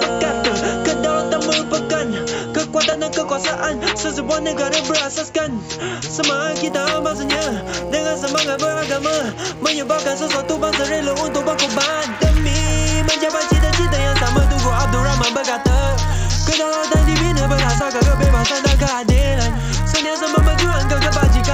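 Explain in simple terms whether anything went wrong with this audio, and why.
Resampler restarted on every block, from 6.66 s to the end: the audio was converted in separate 10 ms chunks, each handled as if nothing came before or after it, so every chunk edge leaves a small glitch, heard as a steady 100 Hz buzz whenever sound is present.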